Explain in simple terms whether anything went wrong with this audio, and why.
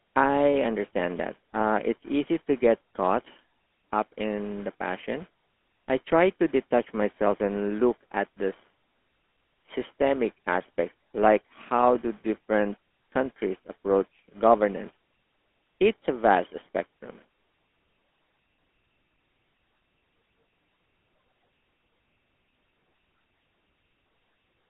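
The voice sounds buzzy, gravelly and thin from start to finish, like an old mobile phone call. That's the GSM full-rate codec, which rebuilds speech from a simplified model, heard over a phone line that discards everything above roughly 3.5 kHz.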